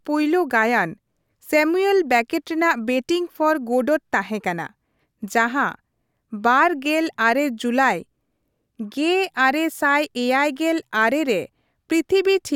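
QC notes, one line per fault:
No technical faults are audible; the signal stays continuous and steady in level across the whole clip.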